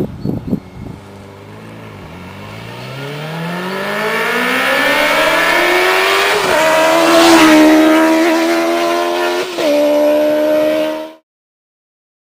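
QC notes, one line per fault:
No faults found; the sound fades out smoothly near 11.2 s.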